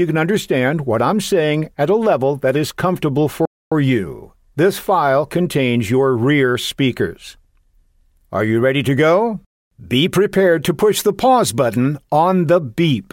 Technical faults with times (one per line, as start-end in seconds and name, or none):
3.45-3.72 playback stall